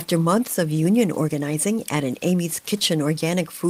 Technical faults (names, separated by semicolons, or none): none